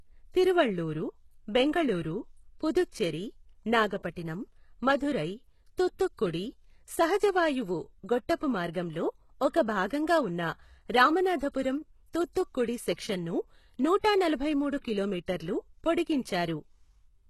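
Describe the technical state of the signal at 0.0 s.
At 0.0 s the speech already carries heavy codec damage that persists through the whole clip, likely HE-AAC compression at a very low rate near 16 kbps. Treble is rebuilt from copied lower bands and stops near 12.3 kHz, so s sounds come out gritty and metallic.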